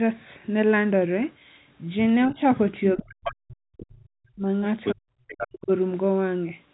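At 2.28 to 2.41 s the talker's level dips, about 10 dB. From 2.95 to 4.49 s it drops sharply, by around 40 dB at its deepest. This is speech suppressed in double talk, likely caused by the echo canceller ducking everything while both sides spoke. On a waveform it shows as a sudden gouge in the envelope, and on a spectrogram as a near-blank band across all frequencies.

Inside that gap, at 2.99 to 3.03 s and 3.26 to 3.31 s, faint scraps of the other side's voice leak through, well below the speech. They show as small isolated smudges on the spectrogram, likely residual loudspeaker echo the canceller missed.

A stronger leak at 4.84 to 4.94 s, only slightly under the talker's level, runs straight into another deep suppression at 4.93 to 5.06 s.

The last leak, at 5.28 to 5.47 s, overlaps a final suppression from 5.34 to 5.71 s. There the talker's trace thins to almost nothing while the foreign voice's harmonic streaks remain. 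All of this sits inside the telephone band, which stops near 3.9 kHz.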